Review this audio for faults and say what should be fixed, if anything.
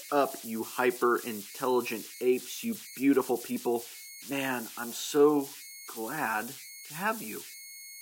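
Converter idle tones run through the whole clip. There's a tone around 2 kHz in the pauses and grainy noise under the speech, sitting only about 16 dB below the signal. That fits an undithered delta-sigma converter settling into repeating bit patterns. Turning on dither in the converter would fix it.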